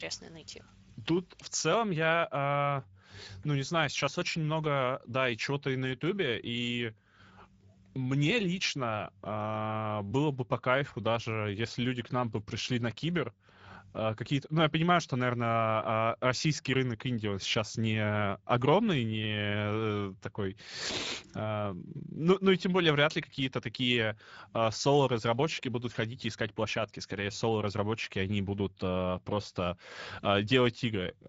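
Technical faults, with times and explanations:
Throughout, Speex codec: plainly hoarse, noisy CELP speech fitting a setting near 17 kbps; the spectrogram shows a hard ceiling at 7.7 kHz with noise-like upper bands.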